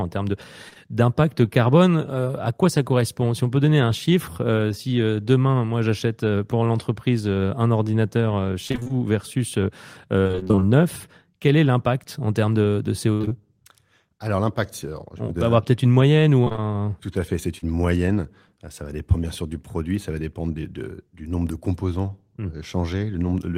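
At 0.69 and 0.73 s, just before "d'impact carbone", two short concealed packet losses occur back to back. Each drops about 20 ms. The decoder extends the preceding sound to fill each hole, causing a brief smear.

Repeated packet loss (robotic sound) follows. At 8.67 to 8.91 s, after "pour l'entreprise un ordinateur", six gaps leave half the span concealed. At 10.23 to 10.63 s, before "neuf quel est l'impact", ten gaps follow. Then come four gaps at 13.13 to 13.33 s, the longest 57 ms, and four more at 16.45 to 16.61 s. Constant patching makes these stretches choppy.

At 17.58 s, another short concealed loss removes 40 ms. Its fill adds roughly 10 ms, leaving a small wobble.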